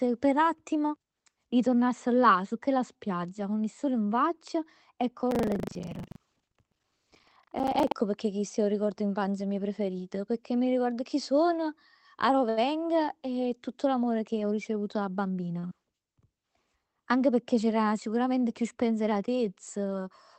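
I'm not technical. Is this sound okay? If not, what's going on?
No, there are a few problems, and one of them lasts several seconds.

From 5.28 to 7.95 s, just after "in faccia e 'o" and running until "pecchè chist è 'o", there is buffer tearing. The program filling the audio buffer and the sound hardware emptying it have drifted out of step. In each chunk, about a fifth of the sound is left over from about a tenth of a second earlier. The result is a steady robotic buzz, about 25 times a second, laid over the speech.

At 12.49 s, right after "ricordo chi sono arò", there is a short stall from a late packet. A piece of the call arrived late, so the receiver held the last sound for about 76 ms until it came in. Nothing is lost, but that moment drags slightly, with a slight buzz or dip. The same thing happens again at 15.60 s, this time for about 34 ms.

From 15.21 to 15.57 s, just after "che ho ricevuto da", there is a jitter buffer speed-up. 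Delayed audio had piled up, so the receiver trimmed out about a twentieth of a second in many tiny slices. The speech runs about 13% faster with no change in pitch, which makes it sound briefly hurried.

At 15.67 s there is a short concealed packet loss. About 40 ms of audio never arrived, and the receiver covered the gap by extending the sound that came just before it. You hear this as a quick smear or wobble, and a short sound there may be missing.

All of this came through a normal call connection, which also softens the very highest frequencies.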